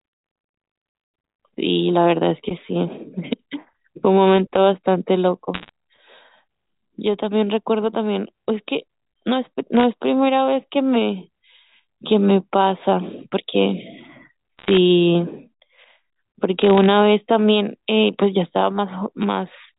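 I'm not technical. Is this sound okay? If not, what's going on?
No. Short bursts of crackly ticks over the speech at 5.54 to 5.69, 9.77 to 9.83, 14.58 to 14.77 and 16.59 to 16.86 s come from bit errors on a digital phone line, where corrupted data briefly garbles individual sound samples.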